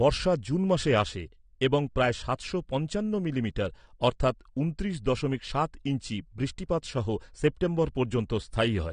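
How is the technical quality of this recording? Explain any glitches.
The recording has clearly audible lossy-coding damage across its whole length. The speech is dull and smeared, with a warbling, fizzy texture on sibilants and sustained sounds, and there is no content at all above 9.7 kHz. This is likely AAC compression. The encoder quantises each frame's spectrum coarsely, cuts the top band entirely and leaves gaps or noise-filled bands. The degree of damage fits a low bitrate of around 32 kbps.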